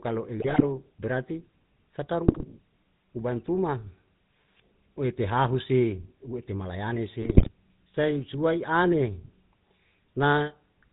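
Speech carried throughout by the GSM full-rate codec: the voice has a buzzy, gravelly roughness and nothing above 4 kHz, consistent with the 13 kbps full-rate coder's pulse-driven vocal-tract model with a heavily decimated excitation. GSM bit errors hit at 0.38–0.65 s, 2.28–2.44 s and 7.22–7.49 s, where the voice breaks into squawks, pops and gargling. This points to a few percent of corrupted bits reaching the decoder, scrambling filter, pitch and gain values across a run of frames.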